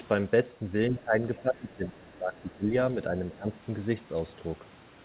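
The other side's voice leaks through at 0.88 to 0.99 s: a faint second voice, about 20 dB under the speech, likely echo the canceller left in the microphone signal. Speech is suppressed in double talk at 1.0 to 2.69 s and 3.1 to 3.58 s, where the voice dips by as much as roughly 15 dB, likely because the canceller turned down both talkers when it couldn't separate them.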